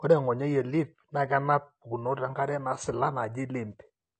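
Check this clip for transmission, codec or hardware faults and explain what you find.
One fault runs through the whole speech clip: low-bitrate audio saved at a high bitrate. Nothing sounds above 8.6 kHz, and the leftover first-encode artefacts point to a low-bitrate first encode, likely AAC, that was re-saved as high-rate MP3. The bigger file restores nothing, unlike a genuinely clean high-bitrate encode.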